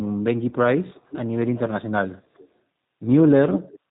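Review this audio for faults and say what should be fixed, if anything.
Throughout, the speech carries the roughness of the G.729 codec. The sound points to an 8 kbit/s G.729A link, which builds each 10 ms frame from a vocal tract filter, a pitch predictor and a few pulses. The result is a slightly synthetic, gritty voice with plainly audible damage. A spectrogram shows nothing above 4 kHz, a hard ceiling across the whole clip, and harmonics that look smeared and pulsy rather than clean. To prevent it, negotiate a wideband codec such as G.722 or Opus instead of G.729.

From 0.49 to 0.54 s there is VoIP packet loss concealed by the speech codec. About 20 ms of audio went missing, consistent with a single lost packet. The decoder filled the gap by repeating its last pitch and filter with falling gain, so the sound is briefly stretched and fades before recovering. On a spectrogram the harmonics freeze into flat, evenly spaced lines that fade. 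The waveform shows a short stretch of repetitive, decaying periods. To prevent it, fix the network loss or add a jitter buffer with forward error correction.

An echo leak appears three times, at 0.92 to 1.19 s, 1.54 to 1.82 s and 2.37 to 2.48 s. A faint delayed copy of the speech trails it by about 0.38 s each time. The copy is roughly 15 dB below the speech at first, then weaker, and finally about 30 dB down. The likely cause is a far-end loudspeaker whose echo canceller let part of its microphone pickup through. A spectrogram shows a dim, shifted replica of the speech patterns. To prevent it, improve the far end's echo cancellation or have them use a headset.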